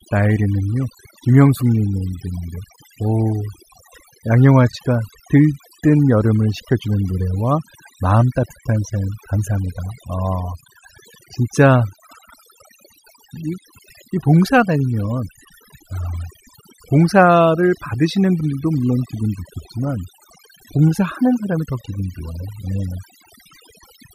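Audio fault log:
Throughout: overdone noise removal. Aggressive noise reduction gates bands near the noise estimate, leaving near-silent gaps with twinkling specks and removing quiet parts of the voice.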